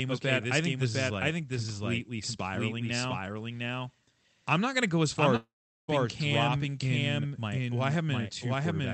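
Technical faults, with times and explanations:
Throughout: doubled audio track. Every bit of the speech comes back again roughly 0.7 s later, about as loud as the first pass, with no reverb tail or room colour. The likely cause is the audio being picked up a second time through a slower path, or an edit leaving two copies out of step.
5.36 to 5.89 s: long network dropout. The last sound is carried on as a fading buzz or hiss, then about 0.4 s of silence follows. The speech picks up again with roughly half a second gone, which points to a likely stretch where packets never arrived.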